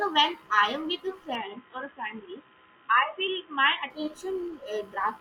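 From 1.35 to 3.90 s the speech turns dull and boxy, with nothing above 3.8 kHz and a faint new noise floor, likely an input switched to a poorer device. On a spectrogram the upper band is cut flat across that span; the waveform shows no gap or level jump.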